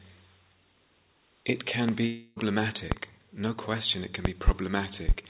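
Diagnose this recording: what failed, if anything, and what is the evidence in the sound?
Sharp loud pops stand well clear of the sound, roughly 20 dB above it, at 1.89 s, 2.92 s and 5.09 s, with a close pair between 4.25 and 4.51 s. The sound continues beneath each one. These are likely voltage steps from wiring, a switch or a driver glitch.

At 2.06 s the sound turns into a fading buzz that lasts until 2.38 s, then resumes further along with about 0.3 s missing. This is a long network dropout: packets likely never arrived, and the receiver stretched the last audio to cover the gap.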